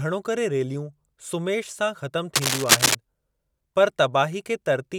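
From 2.34 s to 2.95 s a burst of cable scratch noise rides over the speech, a dense, uneven scratching and rustling somewhat louder than the voice itself. It is likely caused by a worn cable or connector being moved, its contact resistance jumping rapidly. On a spectrogram this appears as a ragged broadband smear across the whole frequency range, and the waveform shows a thickened, jagged envelope of irregular spikes for those six-tenths of a second.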